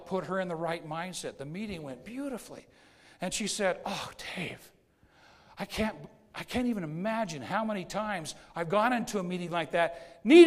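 No technical faults can be heard anywhere in this audio.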